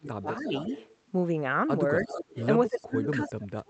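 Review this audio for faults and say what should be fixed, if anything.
Speech suppressed in double talk: the speech dips by about 25 dB between 0.0 and 0.48 s, briefly by about 5 dB at 2.01 to 2.09 s, and by about 30 dB from 2.68 s to the end. The likely cause is an echo canceller turning down the near talker while the far side also spoke. Tuning the canceller's double-talk detection would prevent this.

Echo leak: a delayed copy of the speech trails it by 288 ms. It sits about 15 dB below the speech at 0.31 to 0.96 s, about 10 dB below at 2.0 to 2.46 s, and about 35 dB below at 2.73 to 2.86 s. This is likely loudspeaker pickup that the echo canceller failed to remove. Room reverberation smears the sound continuously, whereas this is a distinct, fixed-delay repeat. Better canceller convergence or a headset at the far end would prevent it.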